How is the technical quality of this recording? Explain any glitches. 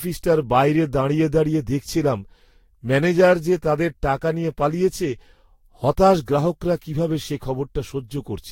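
The technical quality is poor, with one fault present across the whole speech clip.

Throughout, the sound is swirly, hollow and smeared, with blurred attacks and nothing above 16.6 kHz. This is likely generation loss from about five lossy Vorbis passes near 60 kbit/s.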